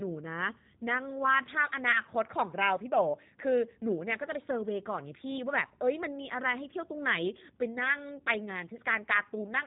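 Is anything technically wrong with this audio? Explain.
Yes. G.729 codec damage runs throughout: the speech is rebuilt from a filter, pitch predictor and sparse pulses, which fits 8 kbit/s, so it sounds rough, synthetic and cut off above 4 kHz.

VoIP packet loss concealed by the speech codec occurs from 1.92 to 2.00 s. About 20 ms went missing, which fits a single lost packet. The decoder extended its last pitch and filter into a brief fading buzzy tone or coloured noise, and the speech stays weakened briefly afterward.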